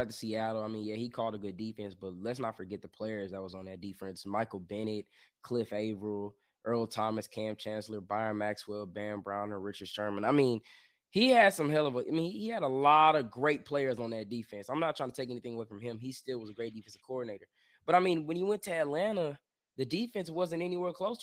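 No technical faults are audible.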